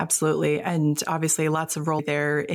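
Right at about 1.98 s there's a quick blip in the speech, and that's damaged data in a compressed stream. A bit of the encoded data got mangled, so the decoder couldn't make sense of the frame there, lost its footing and had to hunt for the next valid frame header before picking back up. What you hear is a quick glitch, over in about 18 ms.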